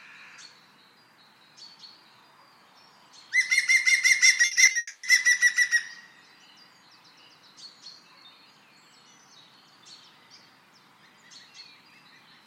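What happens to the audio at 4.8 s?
At 4.8 s the sound has just turned choppy and robotic, then trails off into a fading buzz or hiss. From 4.41 to 4.77 s there is repeated packet loss with a robotic sound. Five separate holes open in the stream, the longest 60 ms, and together about 160 ms of audio is missing. The receiver patches each hole by stretching the last bit of sound it had. With concealment covering 44% of that stretch, the result is a stuttering, synthetic texture.

From 4.77 to 5.05 s the choppiness gives way to a smeared continuation of the last sound, heard as a buzz or hiss. It decays to roughly 10 ms of silence before the audio picks up again further along, with the intervening material gone. This is a long network dropout, likely caused by nothing arriving for about 260 ms. The receiver filled that entire gap by extending the final received sound until it died away.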